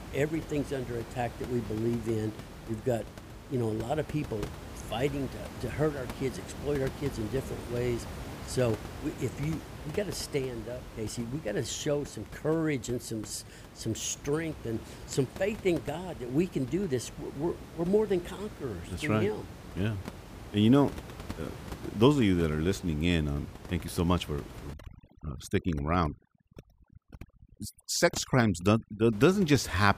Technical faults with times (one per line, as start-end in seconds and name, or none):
24.74-29.13 overdone noise removal